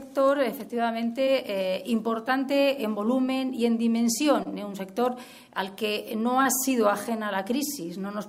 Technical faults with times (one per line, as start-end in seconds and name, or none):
4.43-4.47 short concealed packet loss
6.43-6.47 short concealed packet loss